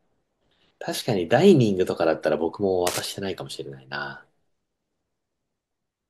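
From 2.87 to 3.05 s, cable scratch noise rasps over the speech, roughly 10 dB below it. A worn connector or cable being moved likely made contact resistance jitter, giving dense, uneven rustling rather than isolated, evenly spaced clicks or a clean dropout.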